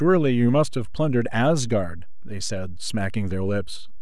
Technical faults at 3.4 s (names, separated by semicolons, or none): DC offset